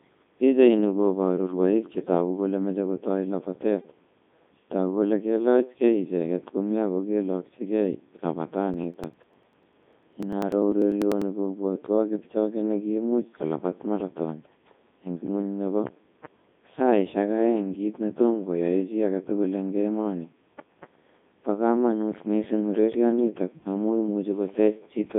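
Throughout, the speech passes through the Codec 2 vocoder at 3.2 kbit/s, which discards the waveform and rebuilds speech from sine waves, leaving it robotic, buzzy and confined to 150 Hz–3.7 kHz. From 8.74 to 11.22 s, just before "kobwatwaan kipchoge nekiimuch kolabaat", periodic USB or driver dropouts skip about a millisecond every 0.099 s, producing some thirty evenly spaced ticks.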